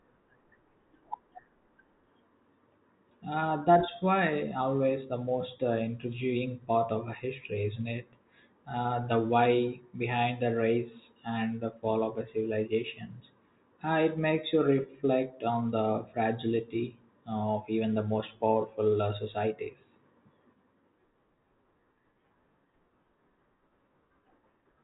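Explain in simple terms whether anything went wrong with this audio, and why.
Nothing went wrong; it sounds like a phone call.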